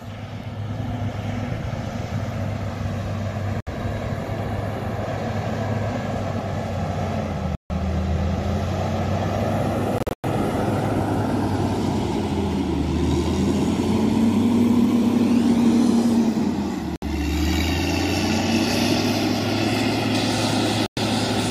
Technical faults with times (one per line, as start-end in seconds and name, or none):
3.60-3.68 Bluetooth dropout
7.55-7.71 Bluetooth dropout
9.98-10.25 Bluetooth dropout
16.96-17.03 Bluetooth dropout
20.86-20.98 Bluetooth dropout